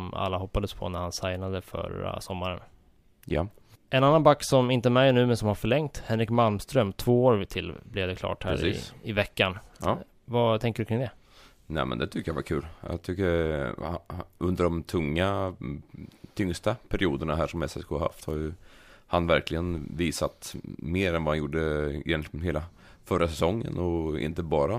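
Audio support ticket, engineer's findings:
No faults found on listening review of the speech recording. Nothing to escalate; ticket can close.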